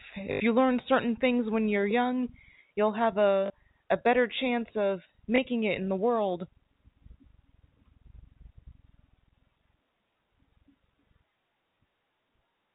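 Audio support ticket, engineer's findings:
Packet loss with last packet repeated: robotic stutter at 0.32–0.40 s before "you learn certain things", 3.46–3.50 s, blip at 5.36–5.38 s; receiver replays last packet, 50 Hz buzz fits 20 ms packets. Path G.711-band-limited, 4 kHz.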